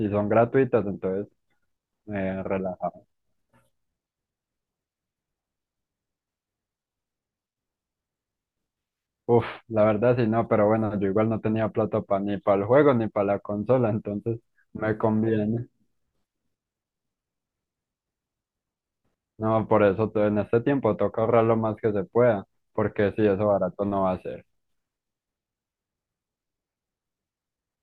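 Nothing technical goes wrong anywhere in this bit of speech, so there's no fault to point out or put a time on.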